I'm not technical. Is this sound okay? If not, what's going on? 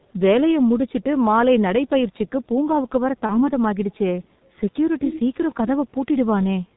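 No. The call used the G.723.1 codec, an old internet-phone method that squeezes speech into very little data and cuts everything above 4 kHz. Throughout the clip the speech sounds muffled and hoarse, and consonants come out blurred.

Around 3.26 s there is VoIP packet loss concealed by the speech codec. One piece of the call, about 30 ms long, went missing, and the decoder filled the gap by guessing from the previous piece. That produces a brief buzzy or noisy, fading sound, and the speech stays weak or warped until about 3.52 s while it recovers.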